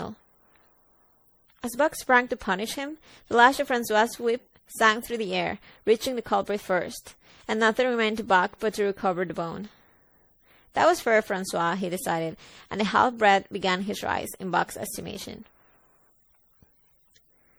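From start to finish the speech carries generation loss: a swirly, hollow coloration with smeared consonant onsets and a watery shimmer in the upper band. It is likely the result of repeated MP3 decoding and re-encoding, something like seven passes at a rate near 64 kbit/s. Each pass requantises on a shifted frame grid, so the holes and noise compound. A single encode at that bitrate would sound cleaner, not this blurred and phasey.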